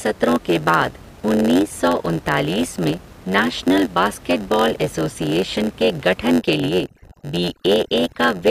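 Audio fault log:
Throughout: block size mismatch (padded). A steady buzz at 91.9 Hz runs under the speech. One stage delivers shorter blocks than the next stage reads. Silence fills the remainder of each block. The speech therefore plays at 0.919 times normal speed, with its timbre unchanged.
6.29 to 8.50 s: overdone noise removal. After "एसोसिएशन के", noise reduction is set too strong. The room noise, about 23 dB below the speech, drops and breaks up into twinkling specks. Quieter parts of the speech are cut along with it.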